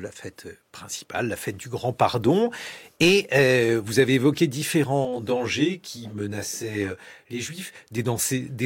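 Speech, with a stretch of channel delay (comb filtering) from 5.05 to 7.75 s, starting just after "euh vous avez évoqué". One channel runs roughly 20 ms behind the other, and when the two are summed to mono the shared content cancels at evenly spaced frequencies, the lowest notch near 30 Hz. The voice turns rough and slightly doubled there. A spectrogram shows fine, regularly spaced horizontal dark bands across that section.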